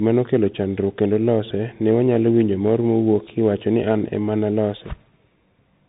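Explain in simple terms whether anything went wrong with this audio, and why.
Something went wrong from start to finish. The speech passed through a Bluetooth CVSD headset codec. This link carries nothing above about 3.8 kHz, so the speech sounds dull and thin. Its crude up-or-down coding makes s sounds scratchy and leaves a grainy hiss underneath.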